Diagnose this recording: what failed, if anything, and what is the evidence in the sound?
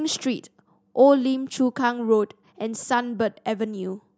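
No faults detected in this recording.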